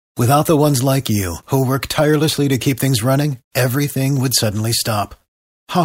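From 0.25 s to 5.75 s, periodic USB or driver dropouts skip a tiny sliver of audio every 0.5 s. Each gap leaves a tick in the speech, silent during pauses. Their strict metronomic spacing separates them from random clicks or network packet loss.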